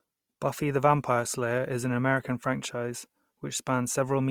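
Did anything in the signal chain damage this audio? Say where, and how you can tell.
Yes. Throughout the speech the tone is rough, grainy and noisy rather than swirly, with the full bandwidth still present. That points to the codec stage, likely Opus compression in its CELT music mode, filling starved bands with folded or noise content, which fits a bitrate near 24 kbps.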